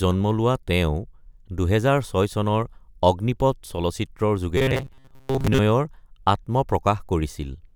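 From 4.57 s to 5.59 s, new audio likely stopped reaching the output quickly enough, so the playback path filled the gap by looping the most recent sliver of audio and skipping what it missed, which is robotic sound from repeated short buffers. Most of that second is made of these repeats. They stamp a fixed buzz at about 133 Hz onto the speech, which fits a loop of roughly 7.5 ms. The result is a rigid, metallic drone that only loosely tracks the speech.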